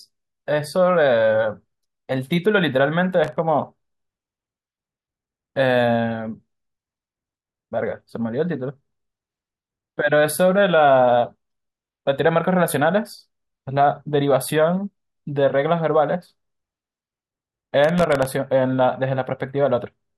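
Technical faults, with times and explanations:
3.24–3.37 s and 17.84–18.25 s, processor overload crackle: a brief gritty tearing rides over the speech, the second burst longer. The processor missed a run of tiny buffer deadlines, likely under a millisecond each, and each miss replayed stale audio with hard edges, which adds up to crackle.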